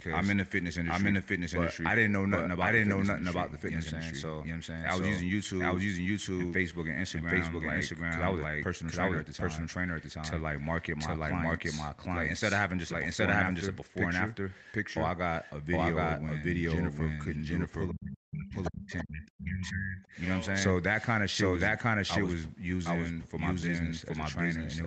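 From start to finish there's a doubled audio track: a second, equally loud copy of the speech trails by roughly 0.7 s, likely from a slow second capture path. From 17.91 to 20.13 s we get speech suppressed in double talk, with the talker ducking by something like 40 dB, likely because the echo canceller couldn't separate voice from loudspeaker echo. Inside that stretch, the other side's voice leaks through in two brief scraps at 18.64 to 18.70 s and 18.98 to 19.04 s, likely residual echo the canceller missed, sitting well below the speech.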